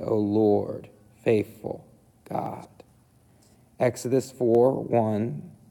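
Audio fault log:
2.46 s and 4.55 s, dropped samples: a single sharp click at each point, likely from a fraction of a millisecond of samples going missing, so the waveform jumps abruptly.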